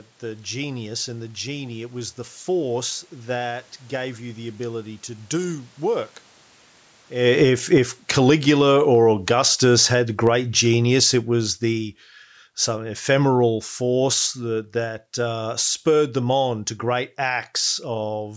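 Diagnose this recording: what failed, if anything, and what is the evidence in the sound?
Automatic gain falling, in the call processing stage: judging the input too loud or its background noise too strong, the gain control eased its gain down by about 20 dB between 5.34 s and 15.03 s. Room noise sinks with the speech, unlike the talker's move near 7 s. The waveform envelope tapers, and the spectrogram dims evenly across all bands.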